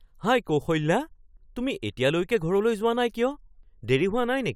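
No technical faults can be heard anywhere in the recording.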